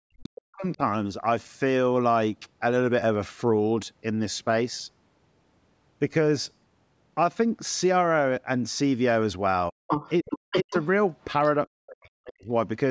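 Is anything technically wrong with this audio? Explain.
Yes, there are two related problems, both typical of a call where both ends talk at once.

Speech suppressed in double talk shows up from 0.02 to 0.81 s, briefly at 9.70 s, then from 10.22 to 10.75 s and from 11.67 to 12.50 s. The speech sinks hard, by roughly 40 dB at its deepest. The likely cause is the echo canceller failing to tell the local talker from loudspeaker echo and ducking everything.

The other side's voice leaking through appears from 9.87 to 10.87 s, sitting roughly level with the talker, and again as a faint scrap from 11.43 to 11.52 s, about 30 dB down. That points to the canceller likely letting far-end audio played on the device's speaker slip back into the mic. Notice the first leak overlaps the 10.22 s suppression. The canceller is fighting the same double talk there. The band-limiting to 8 kHz and the trimmed low bass are just normal call processing.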